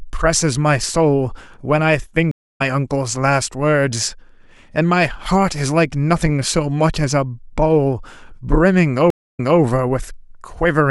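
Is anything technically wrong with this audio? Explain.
Yes, there are two stream reconnect dropouts in this speech. At 2.31–2.62 s the audio cuts to about 260 ms of silence and comes back roughly a third of a second further on, so a bit is skipped. At 9.10–9.59 s there's another 256 ms gap, then it resumes 235 ms earlier, so a short stretch repeats. Each time the connection dropped and the player restarted its decoder mid-stream, which is why the sound eases back in softly rather than snapping on.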